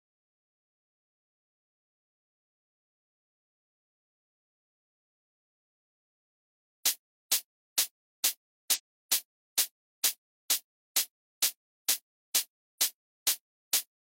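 Compressed frames skipped at 8.73 to 8.80 s in this recording of sounds: about 50 ms of whole frames goes missing, so the audio jumps ahead at the join.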